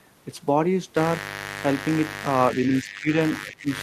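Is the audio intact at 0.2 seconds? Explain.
Yes, the audio is intact at 0.2 seconds, with no fault at that moment.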